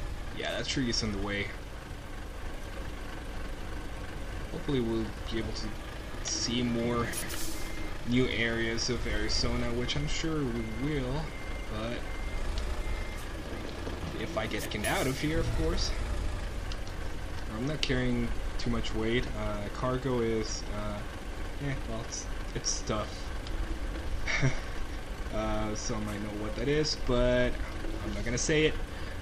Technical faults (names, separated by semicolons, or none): frames out of order